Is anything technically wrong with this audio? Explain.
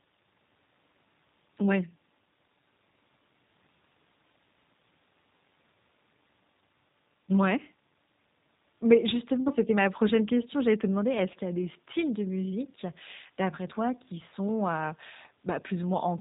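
Yes. Throughout the speech, the audio sounds rough, slightly synthetic and muffled, with nothing above about 3.8 kHz. This is G.729 codec damage: the speech was rebuilt from a vocal tract model, a pitch predictor and sparse pulses, which fits an 8 kbit/s VoIP coder.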